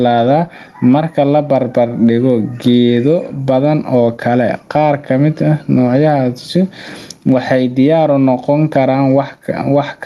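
Gain pumping runs through the whole speech clip. The swing is large, roughly 15 dB. Loud and quiet passages sit unnaturally close in level, so the speech sounds squashed. The likely cause is input gain set far too high, with a fast limiter clamping down on every loud sound. The call codec's top end stops near 12 kHz.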